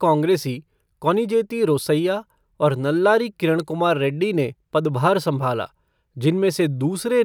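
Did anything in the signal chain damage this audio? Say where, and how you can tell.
No, nothing in the signal chain damaged this audio.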